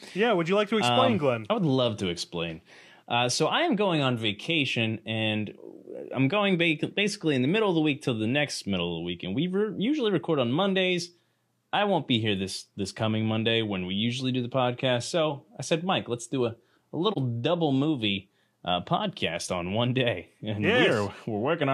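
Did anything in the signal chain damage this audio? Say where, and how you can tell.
Yes. At the codec stage, a brief AAC frame loss with muting leaves a dip in the speech from 17.11 to 17.18 s. The sound fades out and back in rather than cutting off, leaving a brief dip about 43 ms long, which fits a single lost frame. The decoder had no data for that frame and zeroed its spectrum. The overlapping transform windows on either side then taper the signal down and back up.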